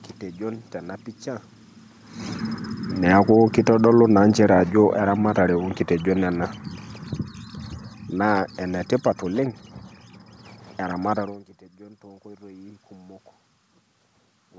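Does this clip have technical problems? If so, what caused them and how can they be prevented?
Yes. Automatic gain falling lowers the speech by about 7 dB from 2.98 to 6.66 s, then about 5 dB from 7.93 to 9.8 s. The room noise sinks with it. Set the microphone level correctly, or turn off automatic gain control.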